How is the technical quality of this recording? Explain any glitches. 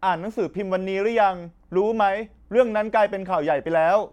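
No glitches can be heard anywhere in this speech recording. There is nothing to explain, as the audio runs without any technical fault.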